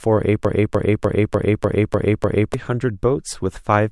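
At 0.45 s the speech locks into a broken-record loop that runs until 2.54 s. A fragment about 0.30 s long plays seven times in a row, each repeat identical and joined straight onto the last. It sounds like a stuck skip, a short stutter hammering the same syllable-length piece. The likely cause is a stalled player or stream re-sending the last chunk it held. Whatever should have played in those two seconds is gone.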